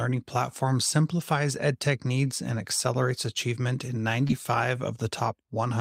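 At 1.19 to 1.21 s and again at 2.51 to 2.53 s, a packet was lost and rebuilt from error correction: the decoder played the lower-bitrate copy carried in the following packet, so there is no gap, but each 20 ms patch sounds rougher and noisier. At 4.27 to 4.31 s comes a short concealed packet loss, where audio arrived too late and the receiver extended the preceding sound for 16 ms across a 20 ms hole, producing a brief smear. Its last 20 ms, 4.29 to 4.31 s, was then rebuilt from error correction, with the same grainy texture.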